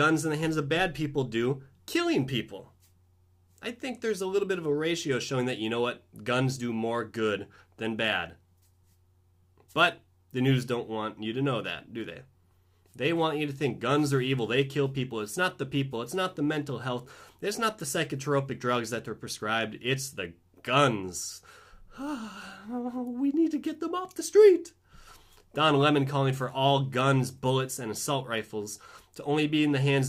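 No technical faults can be heard anywhere in the audio.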